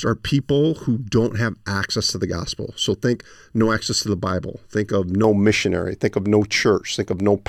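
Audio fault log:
0.00–5.24 s, channel delay (comb filtering): one side of the speech runs roughly 0.7 ms behind the other before the mono sum, so cancellations begin near 700 Hz and repeat evenly above, giving a hollow, phasey tone whose notches stay fixed rather than sweeping like flanging.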